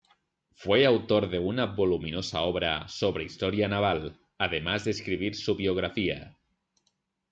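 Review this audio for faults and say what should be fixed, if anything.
Nothing here needs fixing, since no faults turn up anywhere in this speech recording.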